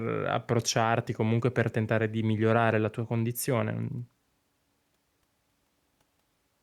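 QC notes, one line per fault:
0.63 s, overlap between stream segments: just before "comunque per tentare di", a few milliseconds of the speech are cut out and the waveform jumps straight to later material, producing a tiny skip. This happens because two stream segments carried overlapping time stamps, and the player trimmed that shared stretch even though the sound was not actually duplicated. Unlike a dropout, no silence or gap is left behind. The sound is simply shortened at a segment join.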